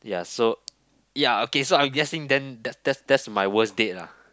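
A recording of speech, with no technical fault to be heard in it. Nothing goes wrong at any point, so there are no times or causes to report.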